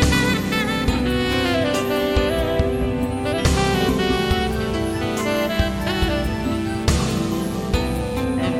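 A buzzing, chirping texture rises under the music from 4.08 s to 8.25 s, pulsing at around 150 Hz and sitting roughly 25 dB below it. This is computer activity noise: processor or graphics load shifts the audio circuit's shared ground.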